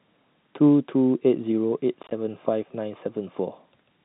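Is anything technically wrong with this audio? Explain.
Yes, there's packet loss filled with silence from 2.03 to 2.11 s. About 40 ms of the speech drops out as short silent gaps scattered over 80 ms, each no longer than 20 ms, which fits 10 ms packets. Those holes have hard edges.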